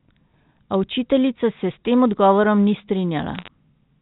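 Telephone-band speech with nothing above 4 kHz, as the G.711 coding implies. From 3.35 to 3.48 s, bit errors on a digital phone line add a brief burst of crackle. Each flipped bit spoils one sample, at an error rate of about 0.4 percent. Unlike packet loss, the speech underneath carries on intact, with no gaps.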